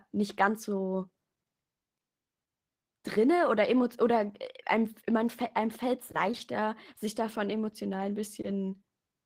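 Speech with plainly audible Opus voice compression throughout. The hybrid coder quantises the signal coarsely and leaves a roughened texture, which fits a bitrate around 16 kbps.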